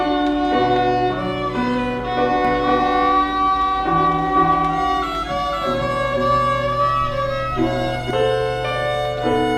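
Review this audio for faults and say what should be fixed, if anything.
A doubled audio track runs from 2.45 s to 8.11 s: a second full-band copy trails the original by about half a second at roughly equal level, dry and abruptly switched on and off, likely from a duplicate capture path. Prevent it by routing each source through exactly one recording path.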